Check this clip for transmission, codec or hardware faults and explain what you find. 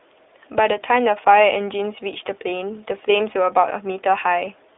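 The speech has passed through an iLBC codec for its whole length. The link was limited to narrowband telephone bandwidth, so nothing below about 300 Hz or above 3.6 kHz survives. The codec coded each short block of excitation independently, which fits 20 ms frames at the 15.2 kbps rate. The result is plainly audible: a boxy, muffled tone with no air or sibilant detail, and a rough, slightly synthetic grain running through the voice.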